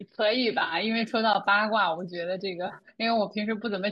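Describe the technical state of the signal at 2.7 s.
At 2.7 s the speech is hit by AAC frame loss with concealment, running from 2.67 to 2.82 s. About 80 ms of audio goes missing, scattered across a 120 ms stretch. No single gap lasts more than a few tens of milliseconds. The decoder patches each hole from the last good spectrum, with randomised signs or interpolated energy. The result is brief smeared, noisy, phasey flickers. The underlying stream is likely low-delay AAC.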